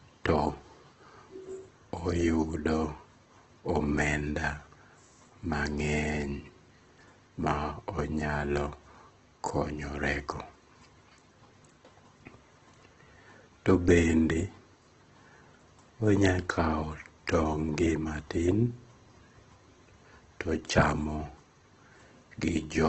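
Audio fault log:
Throughout: Opus compression, heavy. Nothing remains above about 8.2 kHz, so the speech sounds dull and lacks air. The upper bands hold their overall level but sound rough and grainy rather than clear. This is likely Opus in its CELT mode at a very low rate, roughly 12 kbps. When the encoder runs short of bits it keeps each band's energy and fills in the detail with folded lower bands or noise, and that substitution produces the harsh texture.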